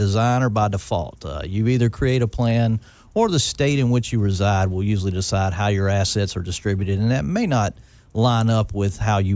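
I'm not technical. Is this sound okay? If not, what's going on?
Yes, this speech recording sounds fine, and nothing in it stands out as a technical problem.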